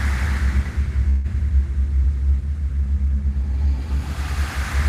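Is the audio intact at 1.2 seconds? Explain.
No. From 1.09 s to 1.26 s the sound stops progressing and a call audio freeze takes its place. The last sound before the stall is extended as a fading buzz or hiss for about 148 ms, never dropping to silence. The likely cause is packets delayed in transit, leaving the jitter buffer empty while the receiver filled the gap. When delivery resumes, the sound picks up where it stopped, so nothing is lost. Everything after that point runs about 148 ms late.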